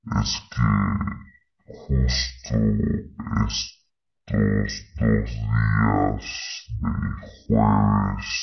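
From start to finish the speech runs at half speed and sits a full octave low, the signature of a wrong sample rate: the samples are clocked out at roughly half the rate they were captured at, with no conversion, which fits 44.1 kHz material played at 22 kHz. Unlike a pitch shift or a time stretch, which alter one property alone, pitch and tempo drop together here, giving the drawn-out, deep sound of a slowed tape.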